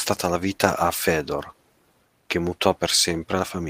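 No dropouts, clicks, distortion or timing errors turn up anywhere in the recording.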